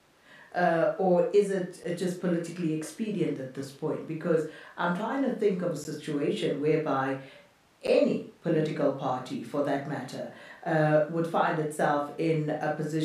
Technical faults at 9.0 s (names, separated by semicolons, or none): none